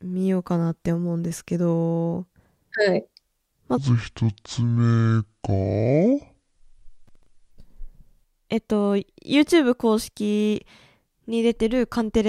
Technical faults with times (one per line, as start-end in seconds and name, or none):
3.77-7.51 section at the wrong speed
7.08-7.26 processor overload crackle